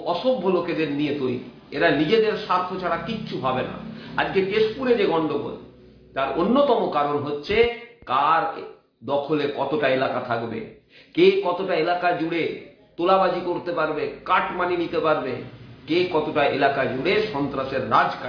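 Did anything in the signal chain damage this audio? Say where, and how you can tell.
Yes. Throughout the clip the high end sounds gritty and metallic, with spurious tones folding back below a hard edge at 5.5 kHz, roughly 25 dB under the signal. This is aliasing from a sample-rate conversion done without an anti-alias filter, which fits a drop from 44.1 kHz to about 11 kHz.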